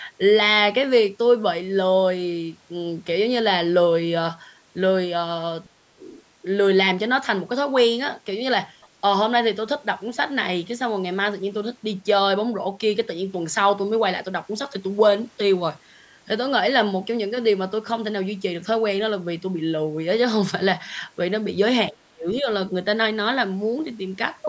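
From 5.74 to 6.03 s, the speech dips sharply, by roughly 30 dB at its deepest. This is speech suppressed in double talk. Both ends were likely talking at once, and the echo canceller turned down the local talker along with the echo.

At 8.81 to 8.88 s, a brief scrap of the other side's voice leaks through. It is faint, far below the speech. The echo canceller likely left some loudspeaker sound in the microphone signal.

From 21.91 to 22.48 s, the speech is suppressed in double talk again. It drops by roughly 35 dB, likely because the canceller again muted the talker while the far end spoke.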